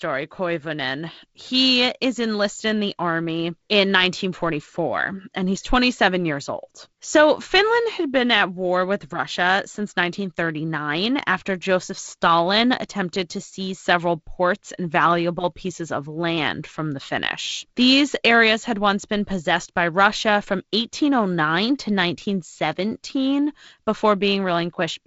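Nothing stood out on listening to this speech clip, which comes through G.722 wideband telephone coding with its upper limit near 7.7 kHz.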